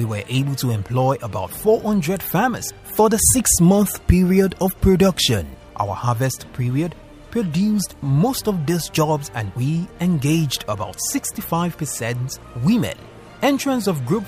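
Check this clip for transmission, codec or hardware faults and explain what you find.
No transmission, codec or hardware faults turn up in this clip.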